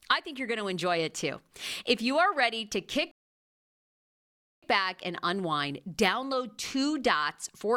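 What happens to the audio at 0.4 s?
At 0.4 s the speech plays through intact, with no dropout, click, distortion or other fault at that point.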